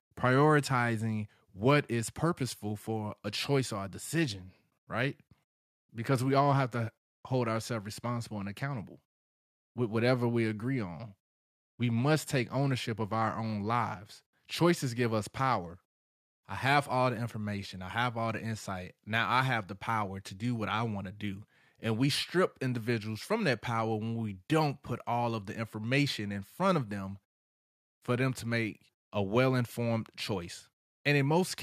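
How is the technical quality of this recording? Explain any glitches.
The signal shows no technical faults or glitches anywhere in the recording.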